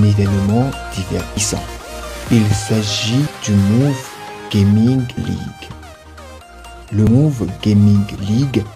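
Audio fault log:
1.37 s, 5.17 s and 7.07 s: audio missing between chunks. At each point roughly a tenth of a second drops out and the two sides butt straight together, so the sound skips forward. The spacing fits boundaries on a 2-second chunk grid, likely lost during the chunk handover.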